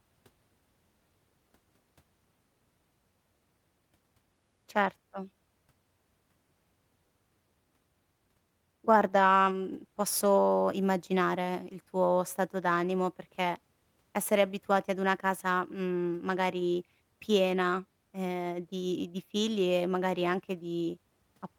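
A speech recording, and nothing is technically wrong with it.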